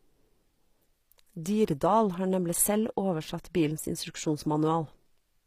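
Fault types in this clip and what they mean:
HE-AAC compression: treble is likely regenerated by spectral band replication, so s sounds turn gritty and metallic; a spectrogram shows copied-looking upper bands and nothing above 15.5 kHz.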